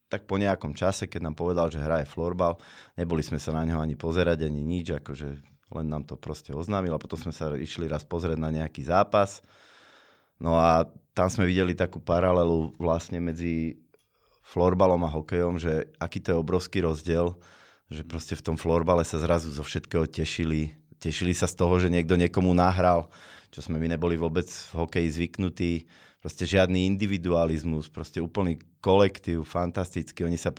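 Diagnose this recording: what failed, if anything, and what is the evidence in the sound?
Nothing failed: listening to the speech reveals no evidence of a fault at any stage.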